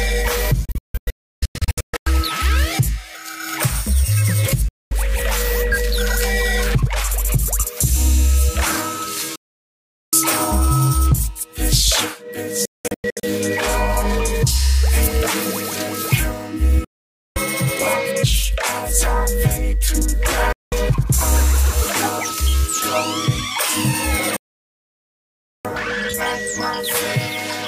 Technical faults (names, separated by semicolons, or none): digital broadcast dropout